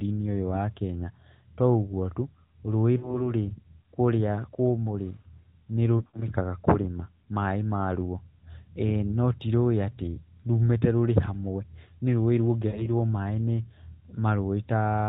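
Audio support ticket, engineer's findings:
Lost AMR speech frames at 2.98–3.32 s (40 ms gap), 5.98–6.34 s (120 ms scattered over 160 ms, longest run 60 ms) and 12.68–12.88 s (60 ms). Smeared, fading speech: decoder concealment repeating the last good frame at falling gain. Narrowband 4 kHz ceiling, with light coding texture fitting the 12.2 kbps mode.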